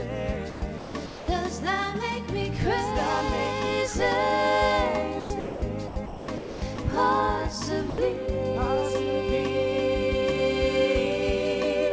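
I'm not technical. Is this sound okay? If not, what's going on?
No. From 0.50 to 1.28 s, 5.20 to 5.62 s and 5.88 to 6.78 s, the sound is chopped by the voice detector, likely because the sender's detector flicked on and off and swapped parts for artificial hiss.

From 7.90 to 7.98 s, the sound is dropped by the voice detector. A brief stretch vanishes under steady filler noise, likely because the detector mistook it for background.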